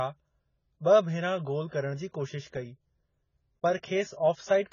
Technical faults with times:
0.00-4.73 AAC compression

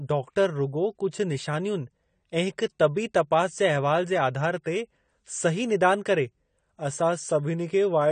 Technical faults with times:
0.00-8.11 AAC compression

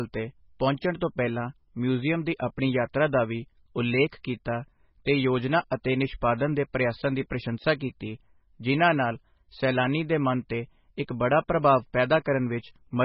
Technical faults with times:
0.00-13.05 MP3 compression
5.70-5.85 pre-echo

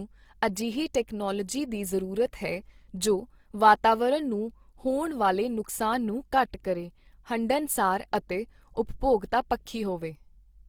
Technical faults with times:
0.00-10.69 Opus compression
9.66 pre-echo

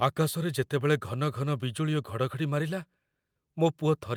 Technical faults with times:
none

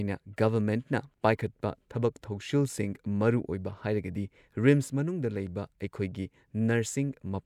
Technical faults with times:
none

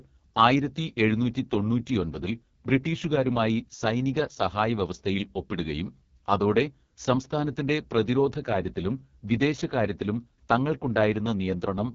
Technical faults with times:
0.00-11.95 AMR wideband (HD Voice) codec

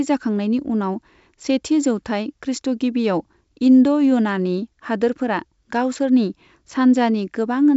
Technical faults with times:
6.67-6.72 bit errors on an ADPCM link

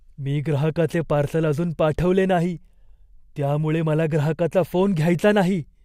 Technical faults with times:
none

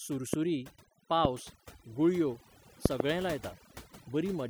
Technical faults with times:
0.00-4.50 overdone noise removal
0.33-0.36 loud pop
1.25-1.27 loud pop
2.86-3.02 loud pop

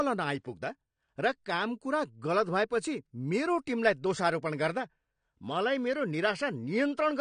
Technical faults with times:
0.00-7.21 AAC compression

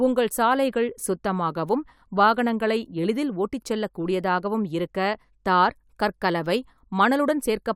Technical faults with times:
none

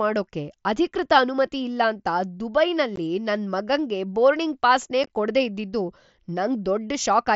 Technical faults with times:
2.96 unconcealed Bluetooth headset packet loss
5.04-5.10 unconcealed Bluetooth headset packet loss

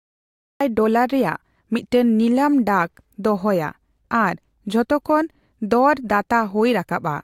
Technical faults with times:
0.00-0.61 cut-off start

